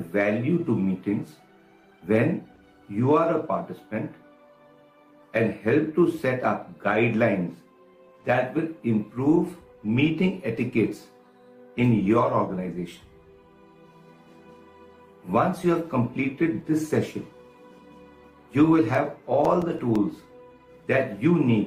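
A short stall from a late packet occurs at 2.55 to 2.59 s. A packet arrived after its playout deadline, and the jitter buffer ran dry. Rather than leave a gap, the receiver held and stretched the last sound for about 20 ms until the data turned up. It then resumed from the same point, so nothing is lost, but playback now runs 20 ms later than before. It sounds like a brief, slightly buzzy smear where the sound lingers.

CD scratch ticks run from 18.95 to 20.12 s, with eight ticks in that span, about seven per second. A blemish on the disc wipes out more data on each revolution than the error correction can rebuild. The player then patches or mutes the damaged samples, producing short dropouts a few milliseconds long at most. They come through as a regular, rhythmic ticking laid over the audio.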